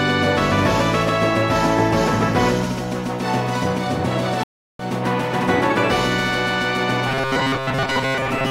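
At 4.43 s the audio drops out in a stream reconnect. The connection broke, the player went quiet for about 0.36 s, then reconnected and started a new decoder partway through the stream. When sound returns at 4.84 s it does not pick up where it left off. It jumps ahead by roughly a fifth of a second, so a short stretch of material is missing. The first frame after the gap fades in.

From 7.07 s to the end at 8.5 s the sound turns into robotic sound from repeated short buffers. It becomes a rigid, metallic buzz at about 133 Hz that still loosely tracks the underlying audio. The likely cause is new audio arriving too seldom, with the software looping the last 7.5 ms chunk to fill the wait. That period matches the buzz frequency, and around 70 percent of the time is filled with repeats while the real material is skipped.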